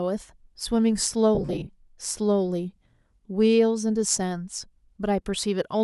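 Between 1.35 and 1.69 s, lost LE Audio frames knock out about 200 ms of audio in short bursts scattered across 340 ms, the longest gap around 40 ms. The decoder patches each hole with a noise-filled copy of the previous spectrum, so the speech breaks into brief grainy smears.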